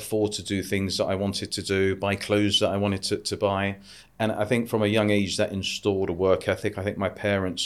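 No technical faults are audible.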